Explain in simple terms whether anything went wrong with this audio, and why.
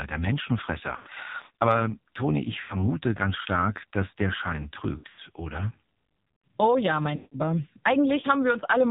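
Yes, two things went wrong. The whole recording went through the AMR narrowband mobile codec, the old phone-call speech format. It cuts away everything above 4 kHz and rebuilds the voice from a rough model, so the speech sounds muffled, buzzy and synthetic. Because it is present the entire time, it is not a brief glitch.

On top of that, there are lost AMR speech frames, short drop-outs where pieces of the signal were damaged in transmission and thrown away. They occur at 0.96 to 1.08 s, 2.60 to 2.87 s (just before "ganz stark dass der"), 4.98 to 5.20 s and 7.16 to 7.40 s. Each time, the last sound is briefly stretched and fades away, and the voice returns weak or rough. Unlike a plain cut to silence or a click, the gap is smeared over with a fading echo of the previous sound.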